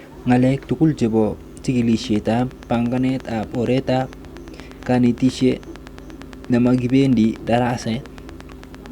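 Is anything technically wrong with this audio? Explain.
Yes. A train of clicks runs from 1.93 s to 8.87 s: a regular ticking of about 8.7 clicks per second, some seventy in all, each peaking a few decibels above the speech. The cause is likely a repeating electrical pulse, from interference by nearby equipment or a faulty connection or power supply, stamping the same short spike into the signal at a steady rate. It is heard as an even popping laid over the speech and continuing through the pauses.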